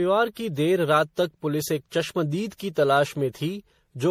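Speech runs throughout with generation loss: swirly, hollow and smeared, attacks blurred. Likely repeated MP3 re-encoding, roughly five passes, fitting a 64 kbit/s chain.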